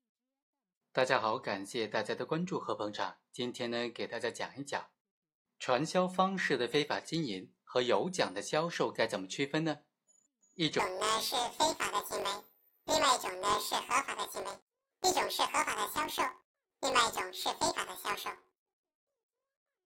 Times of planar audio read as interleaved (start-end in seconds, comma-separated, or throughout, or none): 10.79-19.85